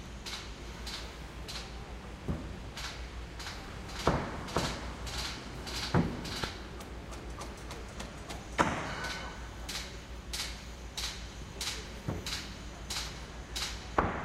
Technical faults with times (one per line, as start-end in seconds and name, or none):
3.68-6.44 doubled audio track